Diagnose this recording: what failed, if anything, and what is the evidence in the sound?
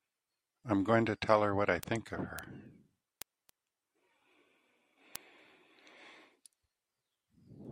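Word clock ticks run through the speech from 0.17 s to 7.65 s, sharp clicks at a steady rate of roughly one every third of a second. A receiving converter, unlocked from the digital link's clock and drifting by around 70 ppm, drops or repeats one sample at each slip.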